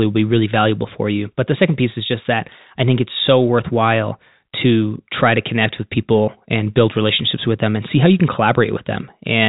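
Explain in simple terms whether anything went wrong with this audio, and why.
Nothing went wrong with this audio; it simply sounds like an ordinary phone call, because telephone lines normally cut off the higher frequencies.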